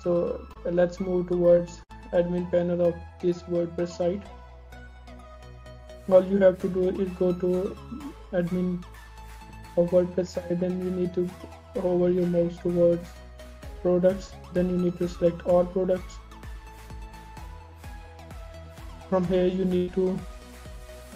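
At 0.53 s and again at 14.27 s there is short concealed packet loss: about 20 ms of sound never arrived, and the receiver extended the preceding sound to cover it. Each is a brief smear, seen on a spectrogram as a momentarily frozen, smoothed patch. At 1.83 s and 19.76 s come bursts of packet loss, covering 60 ms and 120 ms. The last sound is stretched and turned down before the audio resumes further on. This shows as a fading, repeated spectral slice and a dipping waveform envelope.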